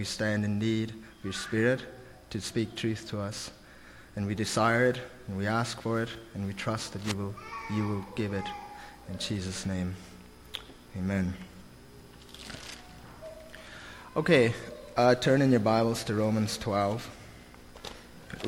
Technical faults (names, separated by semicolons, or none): cable scratch noise